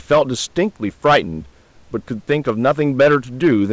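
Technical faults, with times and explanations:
0.12–0.22 s, 1.06–1.18 s, 2.31 s to end: hard clipping, peaks overdriven about 7, 9 and 8 dB and cut flat, giving harsh fuzz rather than rounded saturation.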